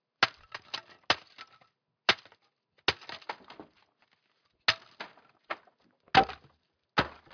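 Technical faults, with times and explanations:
No technical faults can be heard anywhere in this audio. Nothing in it calls for a time or an explanation.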